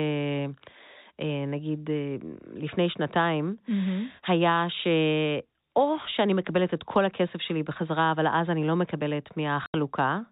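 At 9.66 s the speech drops out for 80 ms until 9.74 s, a case of packet loss filled with silence, with the gap's length fitting four 20 ms packets. The waveform shows a flat line with abrupt edges, and the spectrogram a blank vertical band, all within the 4 kHz telephone band.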